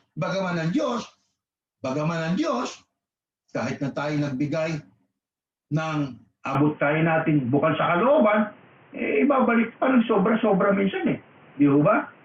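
At 6.55 s the sound abruptly narrows and turns boxy, with no gap at the transition, and stays that way to the end. Nothing above 3.3 kHz survives, the level shifts by around 5 dB, and a new noise floor appears roughly 30 dB under the signal. This pattern points to the input likely switching to a poorer device, such as a second microphone or a headset's call profile, with its own band limit, gain and background noise.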